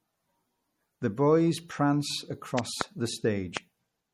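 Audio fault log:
throughout, MP3 compression: The speech sounds plainly watery and swirly, with smeared consonant attacks and nothing above 18.7 kHz. This is likely lossy encoding starved of bits, which fits a low bitrate near 48 kbps, zeroing weak frequency lines that flicker between frames.
2.59–2.83 s and 3.57–3.59 s, loud pop: Right after "boys prance", two sharp pops land in quick succession. A single pop follows at 3.57 s. Each peaks about 20 dB above the speech, which continues underneath. These are likely sudden voltage steps from a switch, static or driver glitch.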